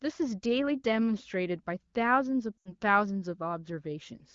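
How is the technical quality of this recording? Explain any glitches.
The recording has one clear glitch, a short break from lost AMR speech frames. The AMR wideband (HD Voice) coding itself sounds clean, with only light codec colouring.

From 2.58 to 2.74 s, the speech briefly drops out. About 80 ms of coded speech failed to arrive intact, which fits four 20 ms frames. The decoder filled the gap by repeating its last good pitch and vocal tract settings at falling level. So the sound drops to near silence within two frames. When real frames resume, the speech returns weak or rough for a moment.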